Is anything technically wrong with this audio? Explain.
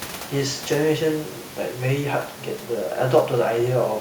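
No, nothing is technically wrong.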